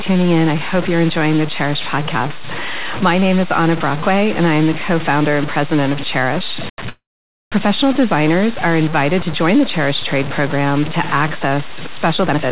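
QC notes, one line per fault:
Throughout, low bit depth without dither. The speech carries a coarse, grainy distortion that follows its level, with the error sitting only about 10 dB below the signal. Quiet passages turn gritty and the softest stretches sputter or drop out. This points to about 4 bits, and to samples likely truncated with no dither to break up the error. The G.711 mu-law call path is audible in the dull top end, with nothing above 4 kHz.
6.89 to 7.55 s, call audio freeze. The sound stalls for about 0.63 s. It is likely that packets were held up and the jitter buffer ran empty. The receiver stretches the last sound into a short fading tail, then about 0.51 s of silence. Speech resumes with "designers are invited to" exactly where it stopped. Nothing is lost. The pause is inserted, and everything after it now runs later.
12.17 to 12.52 s, jitter buffer speed-up. Right after "program to access" the speech suddenly hurries to about 158 percent of normal speed, while the pitch stays put. 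The receiver is trimming a backlog of queued audio by repeatedly cutting out short pitch-period slices, about 0.2 s in total. The speech sounds rushed and clipped in rhythm rather than higher.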